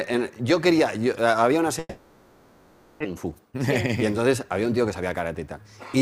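At 1.79 s the audio cuts out and the gap is papered over with a fading buzzy continuation until 3.06 s, likely a long network dropout that loses about 0.94 s outright. From 3.16 to 5.57 s you get a jitter buffer speed-up: it runs at 110% with pitch unchanged, trimming around a third of a second of backlog.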